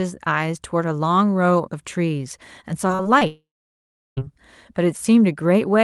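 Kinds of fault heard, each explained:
Repeated packet loss (robotic sound): From 2.87 to 3.23 s, four short holes open in the speech, the longest about 37 ms. Each is patched by stretching the preceding sound, so roughly a quarter of this span is filler and the speech turns choppy and mechanical.
Long network dropout: From 3.27 to 4.19 s the speech disappears for about 0.9 s, likely because the stream stopped arriving. The last sound is briefly carried on and fades, leaving about 0.73 s of silence before the speech resumes with that part missing.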